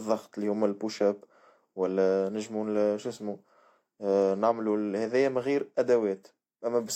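No technical faults can be heard anywhere in the signal, which carries its speech steadily throughout without any audible disturbance.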